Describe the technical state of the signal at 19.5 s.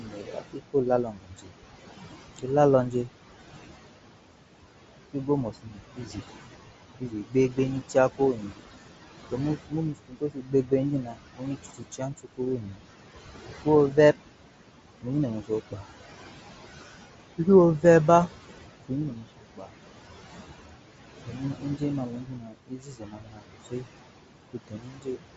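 At 19.5 s the noise suppressor is cutting speech. From 18.88 to 19.74 s it mistakes part of the speech for noise and turns it down, by about 19 dB at the deepest point. Around half a second sounds swallowed and faint.

The same noise suppressor artifacts run under this moment too. It lowers the bands it judges to be steady noise, removing about 17 dB. The room noise, about 12 dB below the speech, sinks and rises with the speech.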